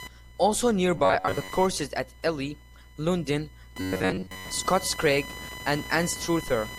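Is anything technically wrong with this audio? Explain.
Yes. Computer activity noise runs throughout: a chirping buzz pulsing around 1 kHz, roughly 20 dB below the speech, from processor or graphics load shifting the shared audio ground.

Robotic sound from repeated short buffers appears from 0.98 to 1.54 s and from 3.81 to 4.49 s. It is likely caused by late-arriving audio being replaced with repeats of roughly 10.7 ms slices, covering about half of the first stretch and most of the second. This produces a rigid metallic buzz at 93.8 Hz that still loosely tracks the speech.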